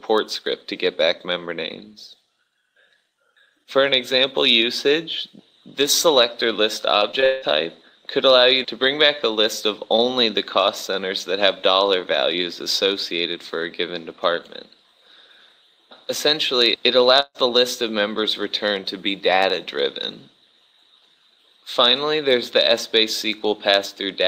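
From 6.99 to 7.44 s, repeated packet loss leaves four gaps patched by extending prior sound, covering about half the stretch; it sounds choppy and robotic. At 17.20–17.36 s, a burst of packet loss drops about 140 ms; the concealment fades out, then audio resumes further on.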